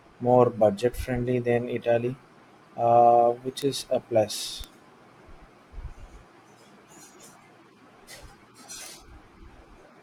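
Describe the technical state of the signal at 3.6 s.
At 3.62 s, between "uh which" and "is a plus", a bit error spike hits one sample: a flipped bit throws its value to about -10 dBFS and straight back, giving one broadband tick unrelated to the speech, unlike a dropout, which leaves a gap of silence.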